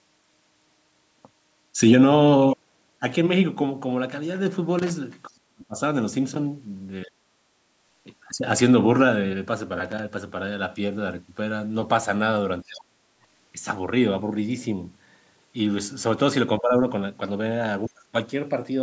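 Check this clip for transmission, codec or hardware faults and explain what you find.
Two kinds of fault are audible in the speech: loose connector crackle and speech suppressed in double talk.

Loose connector crackle occurs at 4.79 to 4.91 s and again at 9.85 to 9.99 s. A worn or dirty contact intermittently opened and closed the signal path as it shifted, chopping the audio. Each burst sounds like irregular scratching. On a waveform it shows as ragged spikes and gaps. On a spectrogram it appears as scattered broadband vertical streaks.

Speech suppressed in double talk occurs at 5.27 to 5.77 s, 7.05 to 7.38 s, 12.64 to 13.06 s, 16.60 to 16.73 s and 17.88 to 18.14 s. The talker's level dips sharply, by roughly 30 to 40 dB in most spots and only about 10 dB near 16.6 s, so the speech thins or drops out in pieces. The likely cause is an echo canceller unable to separate the talker from loudspeaker echo while both sides spoke, so it attenuated everything. 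On a waveform the envelope visibly collapses. On a spectrogram the energy fades across all bands, up to the 8 kHz ceiling of the call path.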